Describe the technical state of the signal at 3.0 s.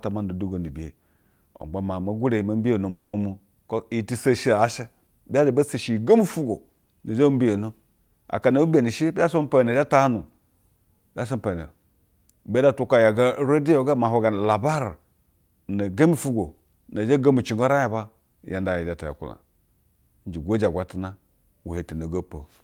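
Long network dropout, 2.89 to 3.15 s: the speech stops and a fading buzz-like continuation fills about 240 ms, likely because packets stopped arriving and were never recovered.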